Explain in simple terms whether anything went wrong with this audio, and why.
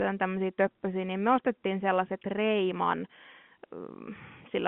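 Nothing went wrong: the speech sounds narrow and phone-like only because it was carried as ordinary G.711 telephone coding, which passes roughly 150 Hz to 3.4 kHz and nothing beyond.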